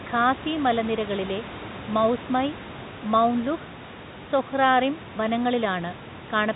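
Nothing stood out on listening to this speech clip.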